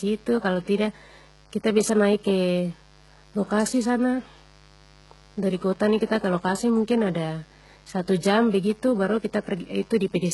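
A switching interference path, such as a dimmer, a rectifier or a missing shield, injects sharp spikes twice per 50 Hz mains cycle into this speech recording. The result is mains buzz throughout: a steady, raspy tone built on 50 Hz harmonics, sitting roughly 30 dB below the speech. The heavy coding damage is likely from HE-AAC compression at a very low bitrate, which fits about 12 kbps. The upper band is rebuilt by spectral band replication rather than coded, so the treble is synthetic, its harmonics do not line up with the lower spectrum, nothing is present above 11.5 kHz, and s sounds come out gritty, metallic or lispy.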